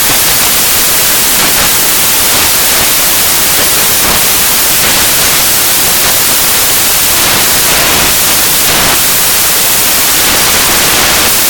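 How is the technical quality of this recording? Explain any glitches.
The technical quality is very poor: the entire clip suffers from samples built from the wrong bytes. From start to finish, each sample has been assembled with its bytes misordered or misaligned, so the rapidly changing low-order bits land in the most significant position. The speech sits under loud, harsh broadband noise, close to white on the louder sounds. A spectrogram shows broadband energy filling every frequency band, and the waveform looks dense and noise-like throughout.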